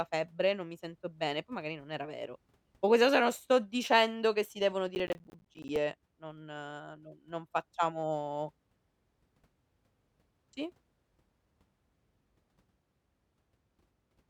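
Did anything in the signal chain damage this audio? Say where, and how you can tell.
Yes. Right after "dicendo che si devono", from 4.95 to 5.76 s, the speech breaks into a gritty crackle of tiny silent dropouts with hard edges. This is processor overload crackle at the driver or buffer stage: the processor kept missing deadlines, with around thirty missed blocks fitting buffers of roughly 10 ms.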